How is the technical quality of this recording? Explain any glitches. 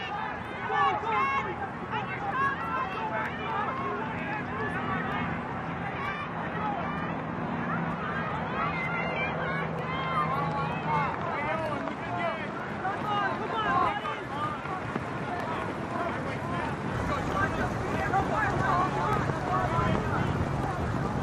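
The recording has two problems: a steady ticking across nearly the whole clip, and a four-second patch where the quality drops.

From 0.45 s to about 21.0 s there's a regular click roughly every 0.93 s, around twenty in all. That's likely clock drift buffer slips. Two devices' clocks disagree by something on the order of 700 ppm, so the buffer periodically drops or repeats a chunk of a few dozen samples.

Between 5.72 s and 9.72 s the sound abruptly turns more compressed, with nothing above 14.8 kHz and rising codec artefacts, then snaps back with no gap. That's the adaptive stream at a lower bitrate, which fits a switch from roughly 96 kbit/s AAC to a 20 kbit/s HE-AAC stream.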